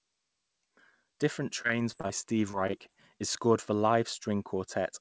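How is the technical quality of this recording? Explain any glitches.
The recording has two bursts of repeated packet loss (robotic sound), from 1.62 to 2.11 s and from 2.51 to 2.90 s. In each, several short holes up to about 20 ms were patched by extending the preceding sound, concealing roughly a fifth of the span. The speech turns choppy, with fragments missing. The audio also has no content above 8 kHz, consistent with a wideband call codec such as G.722.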